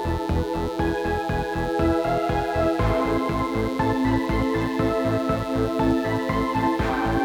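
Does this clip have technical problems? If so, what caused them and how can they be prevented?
Yes. There is mains buzz throughout: a dimmer, rectifier or unshielded path is letting sharp switching spikes in twice per 60 Hz cycle, stacking harmonics up into the kilohertz range. The result is a steady, raspy buzz roughly 20 dB below the sound. Shielded, well-grounded cables kept away from dimmers and power supplies prevent it.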